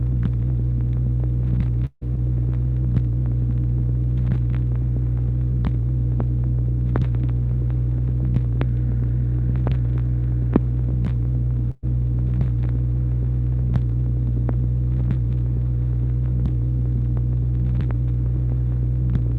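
At 1.85 to 2.03 s the sound smears into a fading held tone and then goes briefly silent before resuming further on, likely a long network dropout that cost about 160 ms. At 11.71 to 11.85 s a similar fading buzz or hiss ending in a short silence marks a burst of packet loss, with about 120 ms of audio skipped.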